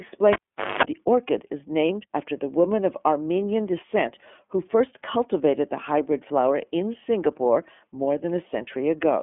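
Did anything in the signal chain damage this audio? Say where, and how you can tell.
Yes, at the codec stage: an iLBC codec runs throughout, with nothing above 3.7 kHz and a slightly rough, synthetic texture from coding each 30 ms frame independently, which fits the 13.3 kbps mode.

There's also analogue wiring trouble: a cable pulled and plugged in from 0.33 to 0.83 s. A pop, about 450 ms of dropout with roughly 220 ms of 50 Hz mains buzz as the tip touches, then another pop on reconnection.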